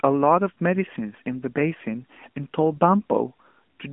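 AMR narrowband mobile codec damage runs throughout the speech. The band is confined to roughly 200 Hz to 3.4 kHz with nothing above 3.8 kHz, and the vocal-tract model's pulse excitation leaves a plainly buzzy, synthetic edge, which fits a mid-rate mode near 10.2 kbps.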